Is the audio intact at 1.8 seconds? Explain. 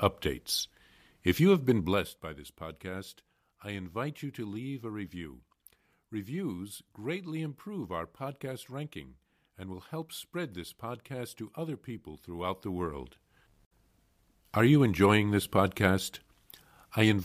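No. From 1.78 to 2.20 s, between "you have been" and "by this podcast I", a rapid ticking rides on the speech: zipper noise. The level falls by about 15 dB in coarse steps, roughly 200 per second, with no smoothing, and each step clicks.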